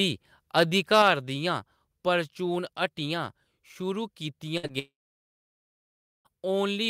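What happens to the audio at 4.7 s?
Around 4.7 s the sound breaks up in three stages. A burst of packet loss runs from 4.57 to 4.65 s. About 60 ms of audio never arrived, and the receiver stretched the last sound into a fading buzz or hiss before jumping ahead. On a spectrogram this shows as a smeared, repeated texture that thins out, with an abrupt change in texture where real audio resumes.

A short concealed packet loss follows from 4.67 to 4.71 s. Only 20 ms went missing, and the decoder filled it by continuing the preceding sound, then blended back into the real signal. It is heard as a brief smear or wobble. The waveform shows a slightly too-regular patch, and the spectrogram a faint blur between frames.

Then, from 4.79 to 6.27 s, the audio drops out for roughly 1.5 s. This is likely a long network dropout. The last sound briefly continues as a decaying buzz or hiss, then gives way to about 1.3 s of silence before sound returns with the intervening part gone. 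The waveform goes flat, and the spectrogram turns to a blank band.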